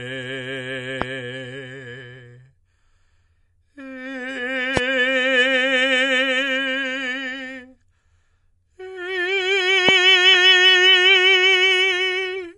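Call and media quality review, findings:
MP3 compression, whole clip: watery, swirly top end on the music, smeared attacks, nothing above 11.5 kHz. Likely a low-bitrate encode, around 48 kbps by the sound. Encoder short on bits, treble cut off hard, weak bands dropping in and out frame to frame.

Loud pop at 1.02 s, 4.77 s and 9.89 s, each a single pop about 20 ms long. First two sit about 20 dB over the music, last one about 15 dB. Music carries on underneath. Likely a voltage spike from a plug, switch, static or driver glitch getting into the signal path.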